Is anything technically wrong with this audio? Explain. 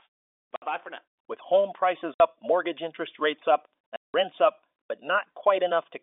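Yes. Packet loss filled with silence occurs at 0.56 to 0.62 s, 2.14 to 2.20 s and 3.96 to 4.14 s. Chunks of the speech stream never arrived, and the receiver inserted digital silence where they should have been. The first two holes last 60 ms and the third lasts 180 ms, which fits 20 ms packets going missing in runs. Each gap chops the speech off abruptly with hard edges. Underneath, the G.711 telephone coding limits the sound to the narrow line band of roughly 300 Hz to 3.6 kHz.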